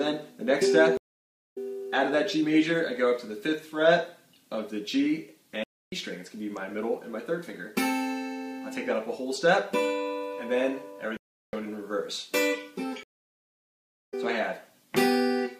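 At 0.97 s there is a stream reconnect. The connection broke, the audio goes silent for 0.52 s, and a fresh decoder then picks up roughly half a second further on, so some material is skipped. At 5.64 s (0.29 s) and 11.17 s (0.36 s) the sound halts mid-flow and then carries on. This is a playback stall, likely from the player running out of data. At 13.03 s a second stream reconnect leaves 1.02 s of silence and resumes roughly 0.7 s later.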